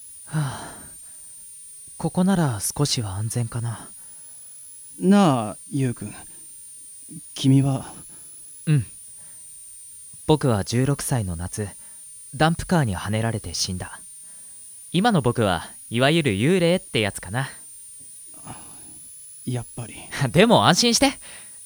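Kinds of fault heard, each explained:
Switching supply whistle: a switching power supply is cycling at an audible rate, and its whistle leaks into the audio path throughout the speech. It is a thin high tone drifting between about 9.0 and 10.0 kHz, roughly 20 dB below the speech.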